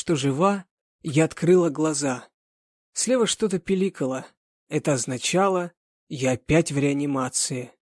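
No technical faults are audible anywhere in the audio.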